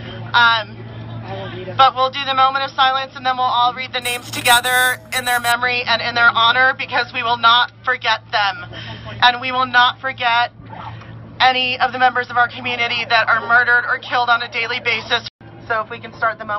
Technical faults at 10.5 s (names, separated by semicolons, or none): none